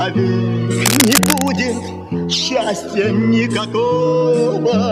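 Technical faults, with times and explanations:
0.86 to 1.48 s, cable scratch noise: a burst of dense, ragged crackle roughly as loud as the sound itself, likely a worn lead or connector being moved.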